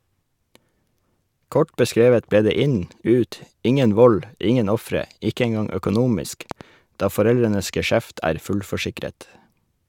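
A speech recording with a loud pop at 6.51 to 6.63 s: two sharp pulses in quick succession, peaking roughly 10 dB above the speech, which continues underneath. The likely cause is a voltage step entering the signal chain, such as static or a switch transient.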